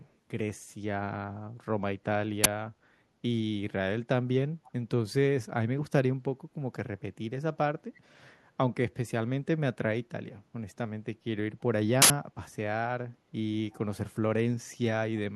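From 0.03 to 0.15 s a faint, delayed copy of the speech trails about 333 ms behind, very quiet (around 40 dB below the voice). It returns at 4.64 to 4.72 s, somewhat louder at about 30 dB down, and at 13.71 to 13.75 s at about 35 dB down. This is an echo leak, likely from a far end on loudspeaker whose echo canceller let part of its microphone pickup through and back down the line.

At 2.44 to 2.46 s a sudden, loud crack cuts in, and a longer burst of digital noise hits at 12.02 to 12.10 s. These are uninitialised buffers. A block was played before any audio had been written into it, so whatever stale values sat in memory came out as samples. The lengths fit a 20 ms block for the first and an 80 ms block for the second.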